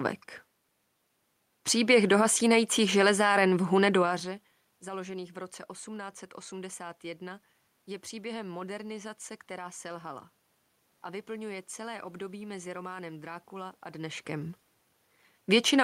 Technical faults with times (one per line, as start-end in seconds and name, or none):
none